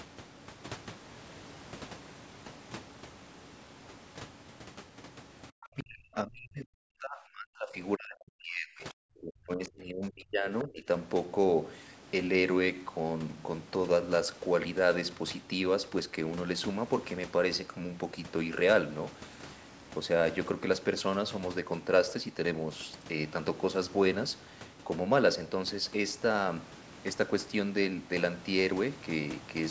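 At 5.63 to 5.68 s a brief, faint scrap of a second voice slips in, well below the talker's level: the other side's voice leaking through, likely because the echo canceller left some loudspeaker pickup behind. Right after, from 5.72 to 7.79 s and again from 7.96 to 10.46 s, the talker's speech sinks steeply, close to vanishing. It dips more shallowly from 10.64 to 10.87 s. This is speech suppressed in double talk, likely the canceller turning down both voices while both sides spoke at once.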